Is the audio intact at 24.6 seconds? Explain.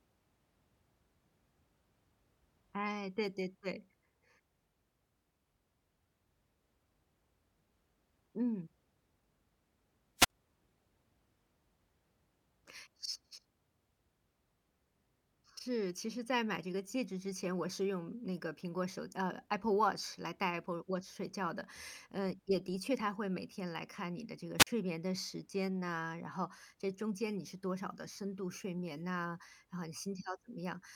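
No. From 24.58 to 24.67 s there is a wireless microphone squelch dropout: the radio signal fades, hiss rises briefly, then the receiver's squelch mutes the output for about 42 ms. That rising hiss before the silence sets it apart from an abrupt digital dropout.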